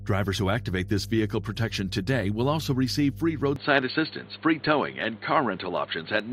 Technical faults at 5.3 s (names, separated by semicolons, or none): mains hum; input switched to a poorer device